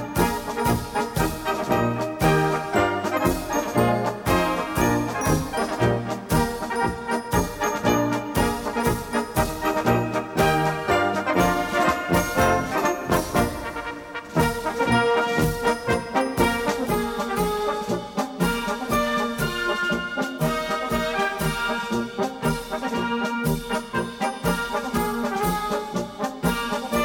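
From 16.87 s to the end at 27.04 s, channel delay (comb filtering) appears. One channel lags the other by roughly 5 ms, and summing to mono cancels shared content at evenly spaced frequencies starting near 100 Hz. The sound turns hollow and phasey.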